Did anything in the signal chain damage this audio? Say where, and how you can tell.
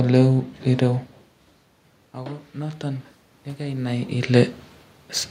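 Yes, automatic gain rising in the call-processing stage. From 2.15 s to 4.41 s the level swells by about 4 dB, climbing slowly rather than jumping. The input had dropped by about 18 dB, and the AGC answered by lifting its gain over those two seconds. The room noise rises along with the speech, which sets this apart from the talker moving, as happens near 1 s and 3.5 s, where only the voice changes level.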